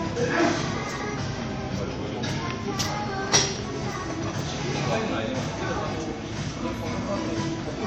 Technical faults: generation loss; drift correction step

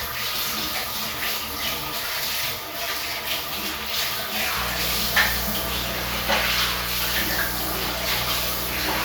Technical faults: mains buzz

